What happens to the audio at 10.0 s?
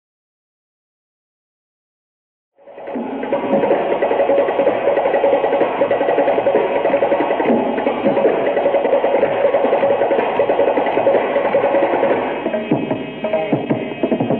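Nothing goes wrong at 10.0 s; the audio is intact there.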